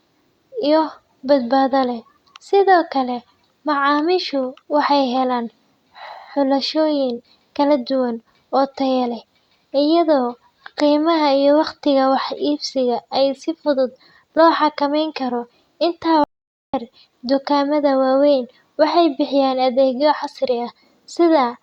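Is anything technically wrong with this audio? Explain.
Yes, there's an audio dropout to silence in this speech clip. From 16.24 to 16.74 s the sound cuts out completely for about half a second, then comes back mid-flow on "dukaamada waaweyn waxay bixiyaan". The gap is dead silence with no room tone at all, so whatever was said there is simply gone. That points to the input being lost briefly, likely a momentary disconnect or mute, while the recorder kept writing silence.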